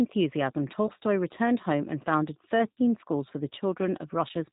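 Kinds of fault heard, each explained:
G.729 codec: The speech sounds plainly rough, slightly synthetic and dull at the top, which points to an 8 kbit/s G.729-type codec rebuilding each 10 ms frame from a vocal tract filter, pitch predictor and a few pulses, with nothing above 4 kHz passing.
VoIP packet loss concealed by the speech codec: A brief stretched smear at 0.87 s before "returned home and founded", and a longer fading one between that phrase and "schools for the", about 20 ms and 60 ms of sound replaced by the decoder's extrapolation from its last pitch and filter.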